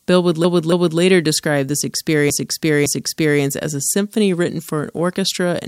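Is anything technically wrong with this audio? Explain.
Yes. The speech contains repeated frames in two places. From 0.44 to 1.00 s, just before "describe this", a block of about 0.28 s plays two extra times. From 2.30 to 3.42 s, between "describe this" and "as a symphony written", a block of about 0.56 s also plays two extra times. In both cases a stretch of compressed frames was written or sent more than once, so the decoder replays it. This is heard as a stutter, and the clip runs about 1.67 s longer in total.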